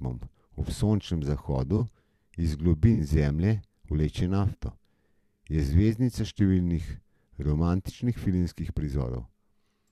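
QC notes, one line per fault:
1.77–1.80 s, 2.93–3.01 s, 4.51–4.55 s: corrupt frame concealed. The decoder caught damaged AAC frames and papered over them. The damaged spans are short, the middle one longer, spanning several frames.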